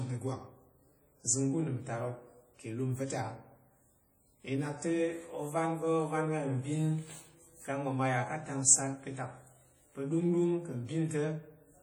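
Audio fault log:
Throughout: likely WMA compression. The speech rings and sounds washy, with a hiss that swells and fades with the signal. Long transform blocks smear quantisation noise over tens of milliseconds. Weak spectral lines drop out, which fits a low bitrate near 32 kbps.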